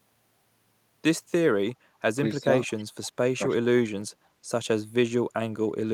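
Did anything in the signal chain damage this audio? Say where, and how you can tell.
Yes. The call processing stage introduced speech suppressed in double talk. Around 2.4–2.7 s and 3.35–3.62 s the speech ducks by about 20 dB, roughly 150 ms each time. The cause is likely an echo canceller clamping down while both ends talked. Unlike packet-loss dropouts, these are level dips with no concealment warble.

Echo leak follows at 2.7–2.85 s and 3.04–3.1 s. A faint copy of the speech returns 296 ms late, sitting about 30 and 25 dB below the direct sound. This is likely far-end loudspeaker pickup that the canceller failed to fully remove. It differs from room reverberation because it is a discrete delayed repeat, not a smooth decaying tail.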